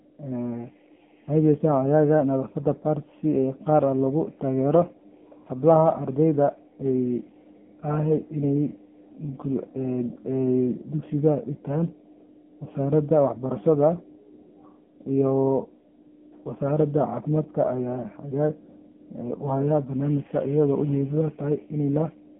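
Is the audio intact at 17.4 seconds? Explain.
No. Throughout the clip, speech passes through an AMR narrowband mobile codec. Its sparse vocal-tract model, fitting roughly 6.7 kbps, makes the voice buzzy and synthetic, with nothing above 3.8 kHz.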